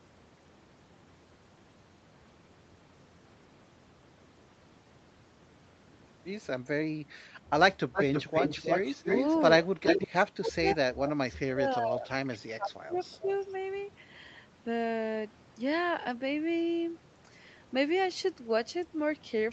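From 7.93 to 9.4 s, an echo canceller likely let loudspeaker pickup through, an echo leak: a copy of the speech returns 318 ms late, roughly as loud as the original. The same leak recurs briefly from 9.86 to 10.08 s at the same 318 ms delay. From 9.74 to 13.29 s the canceller likely mistook overlapping talk for echo, so speech is suppressed in double talk: the voice dips by as much as about 25 dB, in pieces totalling around two seconds. From 12.92 to 13.34 s a faint echo, about 30 dB down, trails the speech by 363 ms.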